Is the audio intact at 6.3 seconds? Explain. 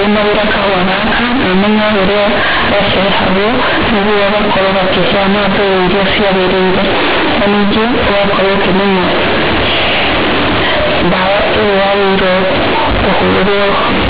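No. At 6.3 seconds, like everywhere else in this speech clip, you're hearing companded audio read as linear. The A-law bytes are being played straight as linear 8-bit samples without expansion, so every sign flip throws the waveform across about half its range and quiet bits come out as big as loud ones. The result is harsh, very loud buzzy distortion with heavy noise filling the pauses, sitting on top of an otherwise band-limited telephone signal.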